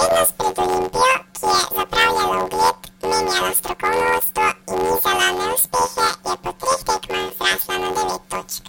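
From start to end, the speech is affected by planar audio read as interleaved. Each block stores all left samples and then all right ones, but playback treats them as alternating pairs. Every block is then squeezed into two double-speed halves, left then right. The blocks are short, about 11.61 ms each, which fits a 512-sample block. So there is no clear octave jump. Instead, a robotic buzz at about 86.1 Hz runs through the voice.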